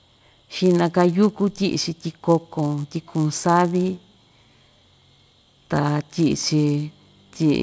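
A speech recording carries a steady 100 Hz buzz under the voice from start to finish, gone in pauses: a resampler restarted on every block, converting 48 kHz to 16 kHz in 10 ms chunks and leaving an error at each edge.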